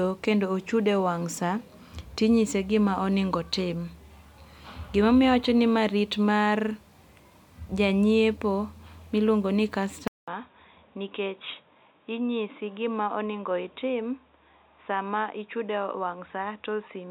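A speech clip. After "go ni", at 10.08 s, a 200 ms silence occurs. The sound then turns dull and boxy, with nothing above 3.8 kHz. It drops a few decibels and gains a faint new noise floor. The input likely switched to a poorer device.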